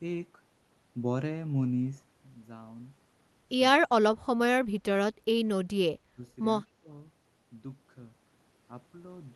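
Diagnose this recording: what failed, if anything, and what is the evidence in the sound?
Speech suppressed in double talk at 3.77 to 4.39 s, 6.11 to 6.19 s and 6.65 to 6.87 s. The speech sinks sharply in pieces: about 25 dB down at its deepest in the first stretch, about 15 dB in the two brief later dips. The stage is call processing. The likely cause is an echo canceller that, with both sides talking at once, could not tell the near talker from loudspeaker echo and attenuated the whole signal.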